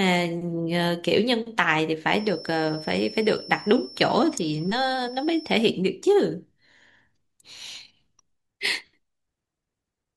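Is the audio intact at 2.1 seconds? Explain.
No. At 2.1 s the speech carries a feedback whistle, which runs from 2.03 s to 5.67 s: a thin tone at one pitch, 5.4 kHz, roughly 20 dB below the speech. It is likely caused by the loudspeaker-to-microphone loop sitting just at the edge of feedback, so one frequency keeps ringing without building up. Unlike a fixed interfering tone or mains hum, it sits high and swells and fades slowly in level rather than holding perfectly constant.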